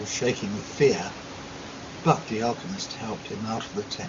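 No technical faults can be heard in this recording.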